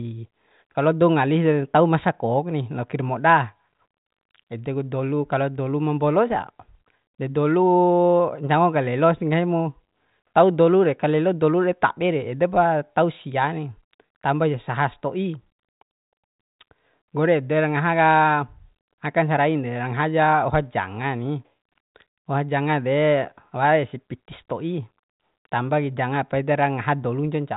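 Speech, with no technical faults to report.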